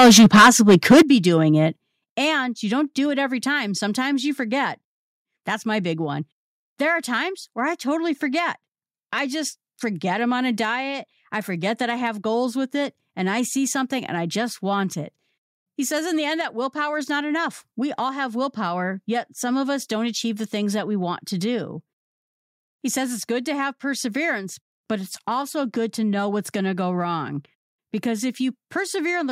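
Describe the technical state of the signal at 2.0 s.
Right around 2.04 s there's a microphone volume stepped down event: the whole signal, speech and background together, drops by about 6 dB in one instant step and stays at that lower level afterwards. There's no fade, just a sudden shift down. The likely cause is the call software deciding the mic input was running too hot and cutting the device's input volume in a single move rather than easing it down gradually.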